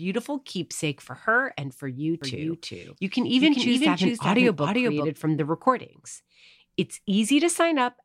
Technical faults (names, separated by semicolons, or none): doubled audio track